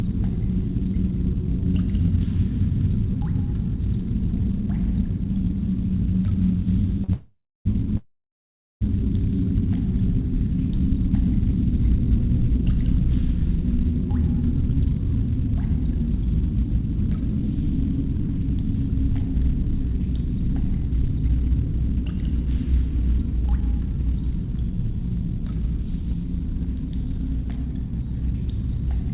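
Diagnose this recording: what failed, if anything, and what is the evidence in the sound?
At 7.04 s a short stall from a late packet appears in the network and jitter-buffer stage. The last sound is held for 42 ms with a faint buzz or dip, then continues seamlessly with nothing lost. Unlike the freezes that follow, it is too brief to decay into silence.

Two call audio freezes follow, from 7.12 to 7.67 s and from 7.97 to 8.83 s. The sound is stretched into a fading buzz or hiss and then falls silent for 0.32 s and 0.75 s. Packets were likely held up on the network until the jitter buffer emptied. The audio resumes exactly where it stopped, so gaps were inserted rather than content dropped, which separates this from packet loss.

From 14.93 to 19.44 s a jitter buffer speed-up runs the sound at 101% speed, trimming roughly a twentieth of a second in tiny pitch-period slices to work off the delay built up earlier. 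The pitch stays unchanged, which rules out a clock or sample-rate mismatch. The call path's cutoff at 4 kHz fits 64 kbps G.711 mu-law.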